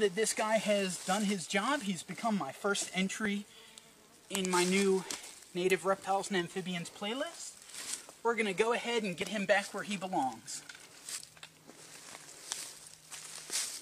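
Small clicks or skips jump the waveform at 3.25 to 3.30 s, then at 9.22 s and 11.18 s. It is overlap between stream segments: where the time stamps of neighbouring 2.0 s segments overlapped, the player trimmed sound that wasn't actually duplicated, losing about 17 to 41 ms each time.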